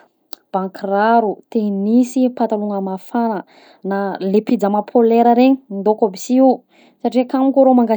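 Nothing stood out as wrong on listening to this speech recording.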